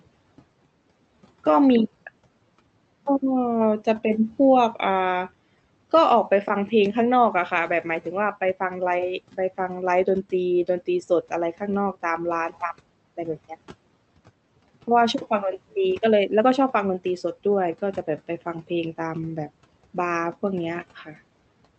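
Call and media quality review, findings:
Speech cut by the noise suppressor, 20.96–21.14 s: sound briefly swallowed, pulled down about 11 dB for about a tenth of a second. Suppressor misclassified low-level speech as noise and applied gain reduction. Attenuated, not silenced, so not a dropout. Room noise sits about 24 dB below speech.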